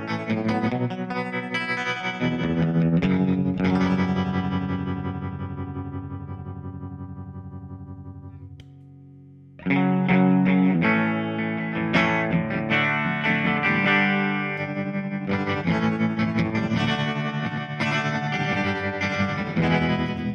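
A doubled audio track starts abruptly at 16.80 s and runs to the end: a second full-band copy trails the original by about 100 ms, roughly 5 dB quieter, with no decay or room colour, likely from a second, slower capture path mixed back in.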